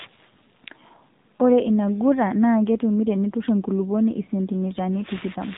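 AMR narrowband mobile codec damage runs throughout: nothing passes above about 3.8 kHz, and the low bitrate, which fits 7.4 kbps, leaves the speech plainly buzzy and synthetic.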